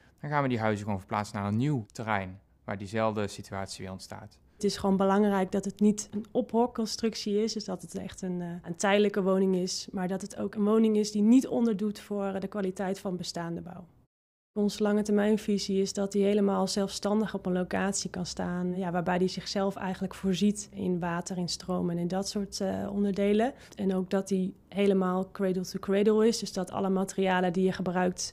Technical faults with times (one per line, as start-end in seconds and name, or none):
none